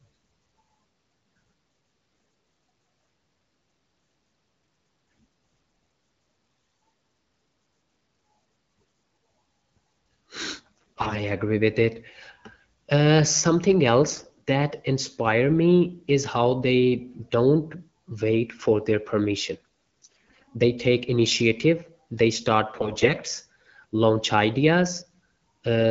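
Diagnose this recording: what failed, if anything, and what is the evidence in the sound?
AMR bit errors on a weak network link. The speech turns hoarse and gargly at 6.45–6.79, 10.78–11.22 before "agree with it", 14.09–14.37 after "uh something", 19.58–20.46 after "wait for their permission", and 22.75–23.14 s. Flipped low-priority bits misplace excitation pulses and skew pitch, gain and spectrum.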